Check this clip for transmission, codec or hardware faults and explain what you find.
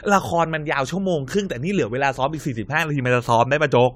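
Generation loss is present across the whole speech clip. Nothing is heard above 16.9 kHz, which fits AAC-LC at around 96 kbit/s. The audio sounds swirly, hollow and smeared, and attacks blur. It was likely re-encoded about five times. Each pass adds fresh quantisation noise and spectral holes on a shifted frame grid.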